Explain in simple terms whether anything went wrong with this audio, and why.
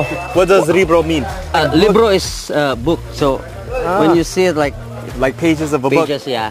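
Something did go wrong: crude rate conversion runs through the whole clip, start to finish. The audio was converted to a new rate by simply repeating samples, which fits a jump from 44.1 kHz to 48 kHz, leaving a faint gritty fizz that clings to louder, brighter sounds.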